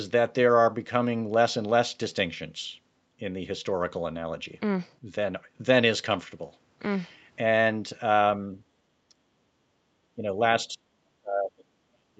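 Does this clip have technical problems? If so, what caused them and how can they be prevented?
Yes. The speech dips in level at 9.09 s, 10.16 to 10.4 s, and 10.68 to 10.84 s, then drops out from 11.21 s to the end. The cuts deepen from about 10 to 15 dB in the short early dips to about 30 dB and then about 40 dB. This is speech suppressed in double talk. The likely cause is an echo canceller that mistook near-end talk for loudspeaker echo while the far end was speaking and attenuated it. Tuning the canceller's double-talk detector to favour near-end speech, or using a headset to remove acoustic echo, prevents it.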